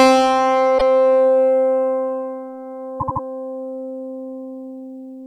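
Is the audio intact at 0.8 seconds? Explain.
No, there are repeated frames from 0.77 to 0.82 s. A 52.2 ms block of the compressed stream, which fits two encoded frames, is decoded and then played once more, so that fraction of the sound comes round again and the clip gains 52.2 ms. It is heard as a brief stutter. On a waveform the same short shape appears twice back to back, and on a spectrogram an identical 52 ms pattern sits directly beside itself.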